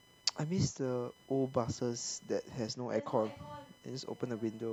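Computer activity noise runs through the whole clip, a faint buzz pulsing at around a kilohertz and sitting roughly 30 dB below the speech. It comes from the computer rather than the microphone: as the processor, graphics card or mouse change their current draw, the ground shared with the audio circuit shifts, and those fluctuations leak into the recording. The whine keeps its own rhythm, unaffected by pauses or loudness in the speech.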